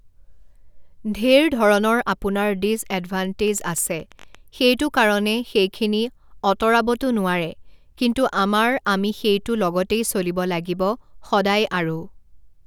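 From 3.48 s to 4.36 s a train of clicks sits over the speech: roughly ten sharp, similar-shaped pulses at an average of about 12.7 per second, spaced unevenly rather than on a steady beat. They peak at around the level of the speech itself, so they read as a distinct irregular ticking on top of it. The cause is likely electrical interference from nearby equipment or a faulty connection or power supply.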